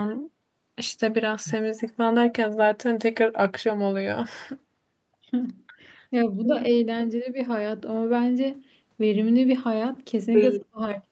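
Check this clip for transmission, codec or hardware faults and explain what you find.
One fault stands out, near the very end of the clip; the audio is band-limited to 8 kHz, as expected from an Opus call path.

Speech suppressed in double talk, 10.57 to 10.81 s: the level plunges by roughly 40 dB, with about a fifth of a second affected. The likely cause is an echo canceller failing to separate the near-end talker from simultaneous far-end echo and attenuating the talker along with it.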